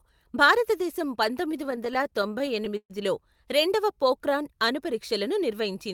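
Speech, with two timing faults. From 1.45 to 2.92 s there are repeated stalls (stutter): the jitter buffer kept running dry, and 21 gaps were filled by extending the last sound, about 320 ms in all. The longest is 128 ms and nothing is lost. A spectrogram shows stretched, smeared frames fading in the longer holds. Between 3.82 and 4.31 s a jitter buffer slow-down repeats single pitch periods to rebuild reserve, adding 43 ms. Playback runs at 92% speed with unchanged pitch, and the waveform shows near-identical cycles repeated in a row.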